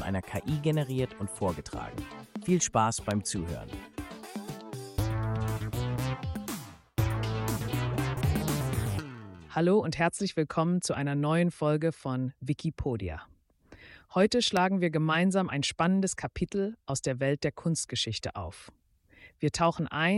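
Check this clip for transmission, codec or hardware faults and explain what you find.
Two loud pops stand out, one from 3.11 to 3.13 s and one from 14.57 to 14.59 s. Each is a single sharp crack lasting about 20 ms and peaking roughly 15 dB above the surrounding sound, which carries on unbroken beneath it. The likely cause is a sudden voltage step or spike entering the signal path, from a plug, switch, static discharge or driver glitch, briefly shaped by the following circuitry into a pop.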